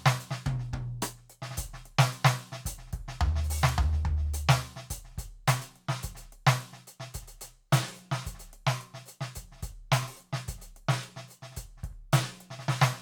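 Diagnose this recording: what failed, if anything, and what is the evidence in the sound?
A bit error spike in the digital path, most likely a flipped bit in storage or on a digital link, hits the music at 3.69 s: a single sample jumps to about -17 dBFS and immediately returns, producing one sharp, broadband tick that has nothing to do with the music.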